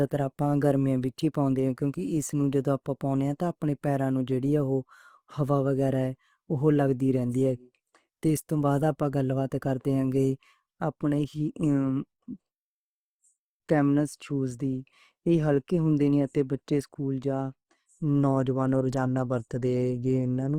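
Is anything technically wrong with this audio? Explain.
Yes. Throughout, the speech sounds grainy and rough. That's likely Opus compression in its music mode, with starved bands filled by noise, which fits a bitrate around 24 kbps.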